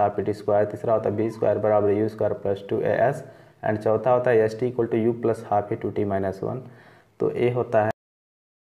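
At 7.91 s the sound stops abruptly mid-event and drops straight into digital silence with no decay, a cut-off end where the final buffers were never written out.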